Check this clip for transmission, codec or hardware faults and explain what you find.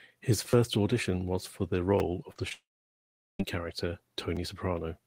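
The speech has three transmission faults: repeated buffers, short concealed packet losses, and a long dropout.

Repeated buffer occurs at 0.50–0.53 s, just before "audition was for the", at 1.99 s, just after "audition was for the", and at 4.36 s. A 10 ms buffer replays three times, once, and once, each a brief stutter-click. On a waveform, identical 10 ms segments tile with hard joins. A spectrogram shows thin vertical lines.

Short concealed packet loss appears at 2.32–2.36 s, 2.37–2.39 s and 2.49–2.52 s. About 30, 10 and 10 ms never reached the decoder, and the gaps were filled by extending the preceding sound. These sound like quick smears or wobbles.

Long network dropout runs from 2.53 to 3.40 s, likely caused by a network outage. About 870 ms of audio is missing. A short fading continuation gives way to roughly 750 ms of silence, and speech resumes with that part gone. Both the waveform and the spectrogram show a flat, empty block.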